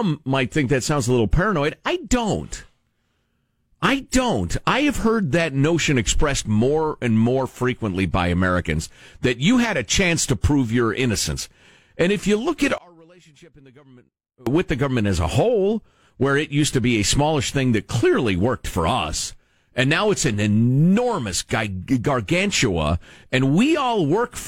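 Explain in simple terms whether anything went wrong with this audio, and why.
Something does go wrong, briefly. Right after "if you look at", from about 12.78 to 14.47 s, the speech drops away almost to nothing, leaving only a faint trace before it comes back at "with the government as". The likely cause is one channel inverted: one side of the stereo pair got flipped upside down, so when both sides are combined, the parts they share cancel each other out.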